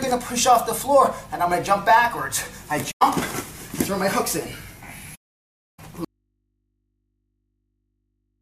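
Soft-edged holes open at 2.90–3.02 s and again at 5.15–5.80 s, fading out and back in: AAC frame loss with muting, where the decoder zeroed the missing frames' spectra, roughly five and thirty frames' worth. From 6.05 s to the end, the sound cuts abruptly to mains hum around 50 dB down, an audio dropout to a faint residue, likely from the signal being lost while the open input stayed live.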